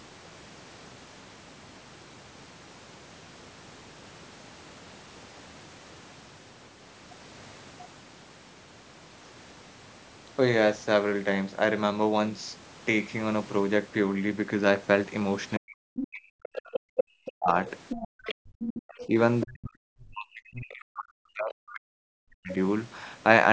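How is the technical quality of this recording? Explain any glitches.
The recording has clear echo-cancellation trouble in its second half, where both sides of a call overlap. The talker's speech is pushed down, the far end's voice bleeds in, and the room sound briefly drops out.

Speech suppressed in double talk, 15.58 to 16.6 s and 17.25 to 22.52 s: the talker's voice sinks by as much as about 40 dB, for roughly a second in the first stretch and about four seconds across the second. It dips and breaks into fragments. The likely cause is the canceller failing to separate the talker's own voice from the loudspeaker echo and attenuating everything. On a waveform the envelope collapses in patches. A spectrogram shows speech energy fading.

Other side's voice leaking through, 15.97 to 19.03 s and again 22.51 to 22.55 s: a second voice sits behind the talker, about 10 dB below the speech in the long stretch and about 20 dB below in the brief scrap at the end. 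This is likely residual loudspeaker echo that the canceller failed to subtract from the microphone. In a spectrogram it appears as a faint, separate set of harmonic bands overlapping the main voice.

Background gated by the echo canceller, 16.88 to 16.97 s: for about 0.1 s the room tone drops by about 40 dB and then returns. This is the canceller clamping the microphone hard while the loudspeaker played. It is heard as a sudden hole of silence. A waveform shows a short flat gap in the noise floor. On a spectrogram it is a narrow vertical dark band across all frequencies, which here stop at 8 kHz because of the call's normal microphone processing.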